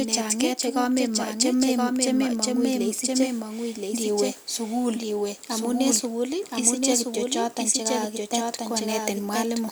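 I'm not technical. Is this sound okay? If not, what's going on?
No. All the way through, the speech is heard twice: a second copy runs about a second behind the first and is just as loud, so the two overlap and blur. This is a doubled audio track, likely caused by the sound being captured a second time through a slower path. Unlike an echo or a room's reverberation, the late copy doesn't fade or sound distant. It is a full, clean duplicate at a fixed delay.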